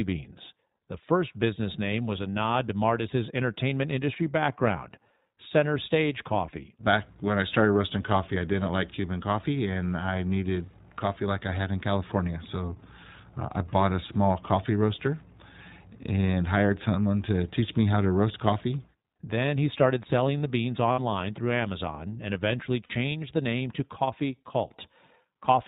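The iLBC codec shapes the whole clip. It is a narrowband coder, so nothing above 4 kHz survives, and the speech has a plainly audible rough, slightly synthetic edge. That roughness comes from each frame's excitation being coded on its own, without help from the frame before. The character fits iLBC's 15.2 kbps mode with 20 ms frames.

Lost iLBC frames cause two short dropouts. The first runs from 20.92 to 21.00 s, just after "started selling the beans". The second runs from 22.84 to 22.92 s, between "and eventually" and "the name to". Each gap lasts about 60 ms, which fits three consecutive lost 20 ms frames. The decoder fills each gap by repeating the last pitch cycle blended with noise, so you hear a brief held, faintly buzzy vowel. Because iLBC frames stand alone, the voice is right again almost at once after each gap.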